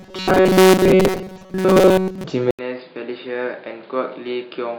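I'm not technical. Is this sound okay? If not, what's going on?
No. From 0.01 to 2.24 s there is robotic sound from repeated short buffers: the speech becomes a stiff, metallic buzz near 188 Hz. Audio likely arrived too slowly, so tiny slices were replayed over most of the stretch. Unlike a simple dropout, it never goes silent.

From 2.51 s to the end, the input switched to a poorer device, likely a different microphone. After a silence of about 80 ms, the speech turns dull and becomes quieter, with new background noise. Unlike the buzz, what changes is the tone, the loudness and the background noise.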